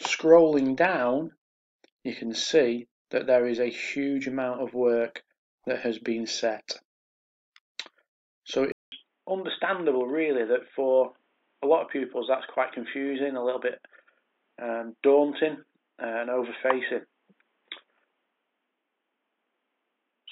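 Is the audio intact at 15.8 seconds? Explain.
No. From 8.72 s to the end, the input was likely switched to a poorer device: after a 200 ms silence, the sound turns dull and boxy, with nothing above 3.8 kHz. A new, faint noise floor also appears, which a simple filter wouldn't add.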